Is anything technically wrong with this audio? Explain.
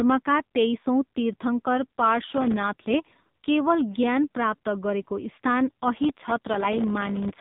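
Yes, two problems. Throughout, the speech passes through an AMR narrowband mobile codec at 6.7 kbps: nothing above 4 kHz survives, and the heavy low-bitrate coding adds a buzzy, synthetic tone that a plain low-pass filter wouldn't.

Processor overload crackle appears from 2.28 to 2.63 s, just after "तेइसौँ तीर्थङ्कर", and again from 6.04 to 7.30 s. Dozens, then roughly a hundred, very short buffers miss their deadlines, each leaving a hard-edged silent gap. The result is a gritty tearing burst rather than a single clean dropout.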